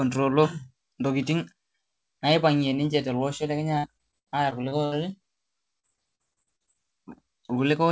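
Speech that turns choppy and robotic from 3.78 to 4.94 s and again from 5.80 to 6.77 s, with short holes of up to 77 ms and then 40 ms bridged by smeared repeats of the preceding sound. This is repeated packet loss. Each lost packet is concealed by extending the last sound, and the next loss follows before the audio recovers. The band stops at 8 kHz, which fits a G.722 call path.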